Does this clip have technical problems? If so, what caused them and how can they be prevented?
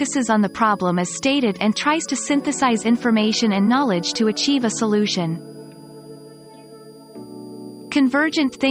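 Yes. A switching supply whistle runs through the whole clip. It is a high tone near 5 kHz, moving between about 4.7 and 4.9 kHz, well below the main signal. A power supply switching in an audible burst mode, or beating with another supply, causes it. Use linear or well-filtered supplies, away from the audio path.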